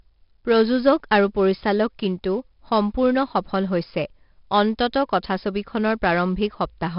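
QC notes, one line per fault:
Throughout, 4-bit ADPCM compression. Each sample is coded as a coarse 4-bit step from a prediction. The error follows the speech level as gritty hiss, with heavy distortion on sharp onsets. Nothing sounds above 5.3 kHz, which fits about 44 kbps.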